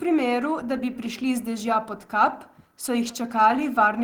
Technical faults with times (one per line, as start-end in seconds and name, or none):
none